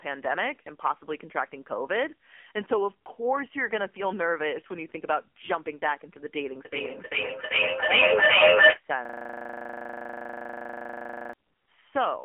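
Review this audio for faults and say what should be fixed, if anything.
The whole clip has gone through the AMR narrowband mobile codec, and it sounds heavily squeezed. Nothing gets through above about 3.8 kHz, and the low end thins out below roughly 250 Hz, so you're left with a telephone-band voice. The buzzy, synthetic edge suggests the vocal-tract model is running on very few bits, which fits one of the low modes around 6.7 kbps. To prevent it, capture or route the speech over a wideband path instead of a narrowband mobile link.

From 9.05 s to 11.33 s there's a system hang loop. The machine or driver froze while the audio hardware kept replaying the same 40 ms slice of its ring buffer, dozens of times over. At that length, each repeat comes around 25 times a second, so instead of continuing speech you get a rapid machine-gun stutter lasting a bit over two seconds. To prevent it, fix the driver or system stall, and have the audio output mute or underrun cleanly when it stops being fed rather than cycling stale buffer contents.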